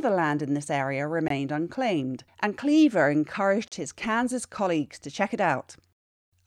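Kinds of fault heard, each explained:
Bluetooth stall: The speech cuts to silence twice and then carries on, at 1.28 to 1.31 s for 20 ms, between "land in this area" and "unclaimed and", and at 3.68 to 3.72 s for 37 ms. Such brief dropouts are likely caused by radio interference holding back packets, so the headphone buffer runs empty and playback stops until the resent audio arrives.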